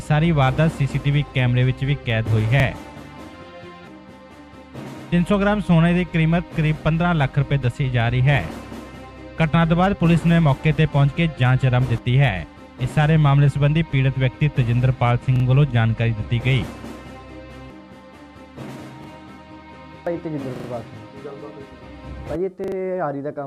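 Repeated buffer faults occur at 1.28, 2.6, 15.36, 19.04, 20.56 and 22.64 s. Each time, fresh audio failed to reach the output in time, so the device replayed the short block it had just played. Each repeated block lasts about 40 ms, which fits a 40 ms buffer. The first, second and fourth events sound twice, the one at 15.36 s three times, and the last two four times. Each is heard as a quick stutter with hard joins, and nothing is skipped.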